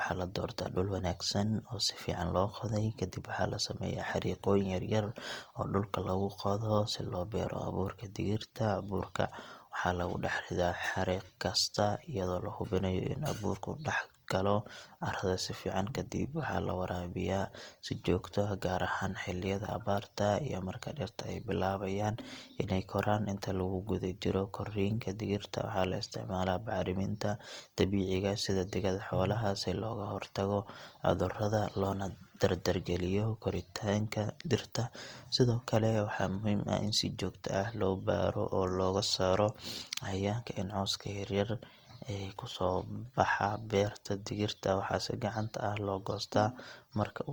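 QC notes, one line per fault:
Throughout: Opus compression, likely the cause of the plainly audible damage across the speech. Bands starved of bits are filled with folded copies of lower bands or with noise rather than left empty, so the voice turns grainy and rough instead of swirling with the watery holes of MP3. Bandwidth stays full, with content reaching about 20.2 kHz, and the encoder stays in its music mode at around 24 kbps.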